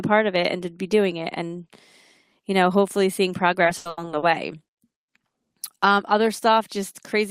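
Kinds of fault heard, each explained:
Repeated packet loss (robotic sound): from 3.63 to 4.25 s, just after "you know hopefully seeing", five gaps in the stream are patched by extending the preceding sound. About 230 ms is filled in, 160 ms is lost outright, and the longest gap is 80 ms, leaving the speech choppy and mechanical.
Short stall from a late packet: at 4.74 to 4.81 s, one packet arrives about 40 ms behind schedule, draining the jitter buffer. The receiver holds the last sound for 40 ms until the packet arrives, then resumes in place, so nothing is lost but the speech briefly drags.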